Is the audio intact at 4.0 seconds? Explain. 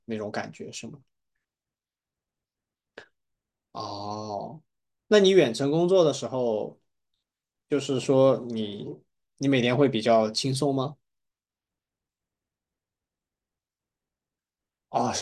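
Yes, at 4.0 seconds the speech plays through with no audible dropout, click, distortion or other technical fault.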